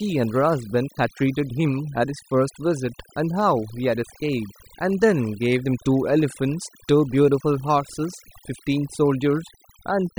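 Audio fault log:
throughout, overdone noise removal: noise reduction set far too strong mutes bands near the noise estimate, leaving near-silent gaps with twinkling specks and quiet parts of the voice removed with them.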